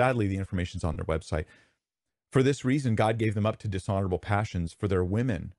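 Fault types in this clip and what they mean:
Bluetooth LC3 compression: Throughout the speech, a plainly audible breathy, grainy edge sits on the upper frequencies, where fine detail sounds swapped for noise. This likely comes from LC3 transform coding zeroing high bands and noise-filling them, consistent with a bitrate near 48 kbps.
lost LE Audio frames: From 0.93 to 0.97 s the speech briefly dissolves into a noisy smear lasting about 30 ms, which fits three missing 10 ms frames. The decoder covered the gap by replaying the last spectrum with randomised signs.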